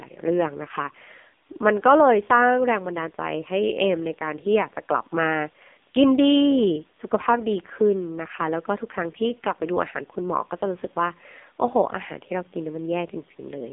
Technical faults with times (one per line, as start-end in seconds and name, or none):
0.00-13.73 AMR narrowband mobile codec